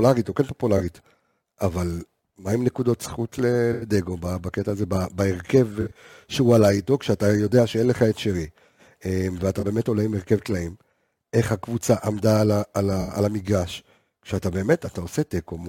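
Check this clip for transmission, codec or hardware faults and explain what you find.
The speech carries one recurring fault, corrupt frame concealed, at 0.77–0.81, 2.73–2.75, 3.73–3.88, 5.81–5.97, 9.60–9.63 and 13.01–13.12 s. Corrupted bits in the compressed stream were detected, and the decoder masked each bad stretch by muting it or replaying a scrambled version of the last good spectrum. Each affected stretch lasts up to about 0.16 s. Unlike a raw bit-error squeak, these frames were covered by the decoder itself.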